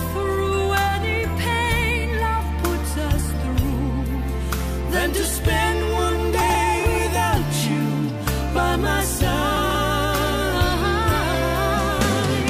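Around 6.41–6.55 s and again at 9.57–9.75 s you get chunks out of order: one roughly 46 ms block plays late, causing a jumbled moment.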